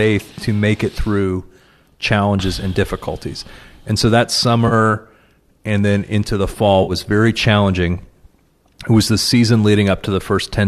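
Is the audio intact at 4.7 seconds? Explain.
No. AAC frame loss with concealment hits from 4.68 to 4.73 s, right after "so that". About 30 ms of coded audio goes missing, which fits three short frames from what is likely a low-delay AAC stream. The decoder covers the gap by rebuilding sound from the last good spectrum with randomised phase. Because the gap is this short, it never fades to silence. It is heard as a brief smeared, noisy or phasey patch.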